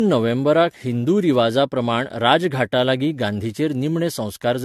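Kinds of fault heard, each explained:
Generation loss: The speech sounds swirly, smeared and hollow throughout, with consonant onsets blurred and nothing above 14.2 kHz. The character points to an AAC-LC chain at about 64 kbit/s, but the damage is heavier than one pass at that rate would leave. The likely cause is repeated decoding and re-encoding, perhaps around four times, with each pass quantising on a shifted frame grid so that noise and spectral gaps accumulate.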